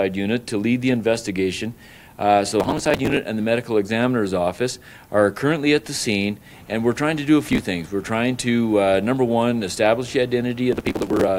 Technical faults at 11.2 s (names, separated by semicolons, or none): processor overload crackle